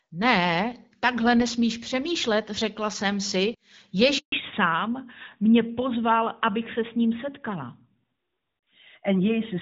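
A handover gap at 4.18 to 4.32 s cuts the speech to silence for 140 ms while the call switches networks and no speech frames get through. A fallback to narrowband follows at 4.32 s and lasts to the end. The wideband HD Voice coding, which sounds clear up to then, is replaced by an older narrowband codec, so everything above 4 kHz is gone and the speech sounds duller and rougher.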